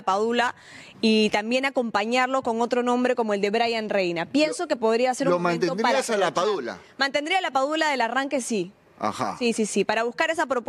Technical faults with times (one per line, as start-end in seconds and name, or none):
9.93-9.95 loud pop